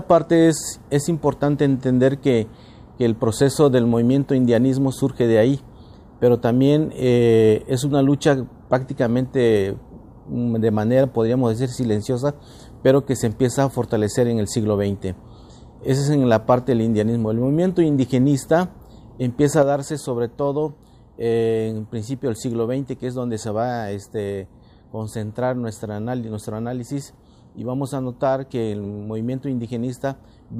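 At 19.63 s the audio takes a sudden gain jump down by about 6 dB, background and all, and stays there to the end, likely a gain change applied without a ramp.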